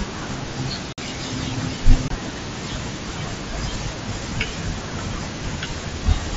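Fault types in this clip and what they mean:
unconcealed Bluetooth headset packet loss: headset-to-phone voice packets dropped with nothing filled in, leaving abrupt gaps of about 52 ms at 0.93 s and 23 ms at 2.08 s.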